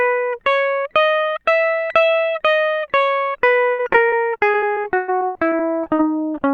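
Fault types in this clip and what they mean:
Repeated packet loss (robotic sound): From 3.71 to 6.05 s the music keeps breaking up across sixteen gaps. Some are patched by stretching the last bit of audio and some simply drop out, and the longest runs to 117 ms. About a quarter of that stretch is concealment, so it sounds choppy. On a spectrogram, smeared horizontal streaks repeat the preceding frame between hard vertical edges. The waveform shows short looped or flattened patches.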